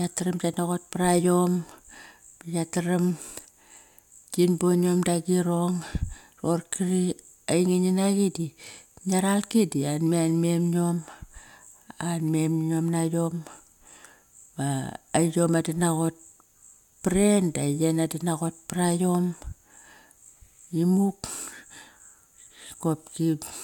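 No audible technical faults anywhere in the speech recording.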